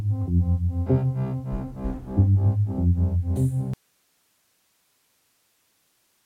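At 3.74 s the feed likely dropped while the path stayed live: an audio dropout to a faint residue, leaving only hiss until the end.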